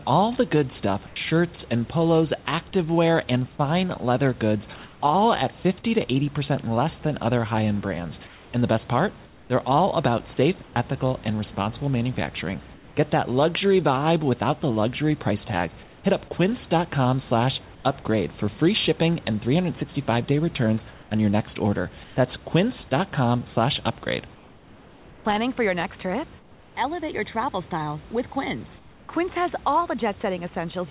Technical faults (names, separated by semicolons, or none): comfort noise in place of the background